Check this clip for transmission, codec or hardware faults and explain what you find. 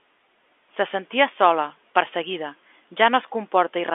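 Nothing amiss: the speech sits in a normal telephone band of roughly 250 Hz to 3.5 kHz, as expected of standard G.711 mu-law coding, with any codec texture faint at most.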